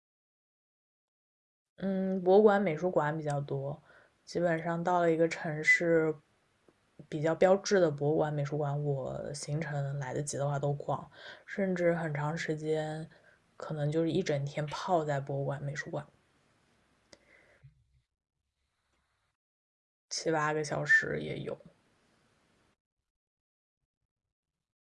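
Nothing in this recording gives a listener anything to flag, so there's no technical fault to walk through here.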